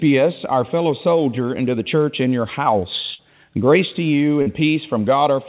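Audio carried over a call path whose band stops at 4 kHz, which fits G.711 mu-law at 64 kbps, shows two packet-loss faults. From 3.14 to 3.23 s there is a burst of packet loss. The receiver stretches the last sound for about 47 ms, fading it down, and playback then resumes further along, so roughly 40 ms of the original is simply gone. At 4.42 to 4.48 s a short concealed packet loss appears as a brief smear. About 40 ms that never arrived is replaced by an extrapolation of the preceding sound and then cross-faded back into the real signal.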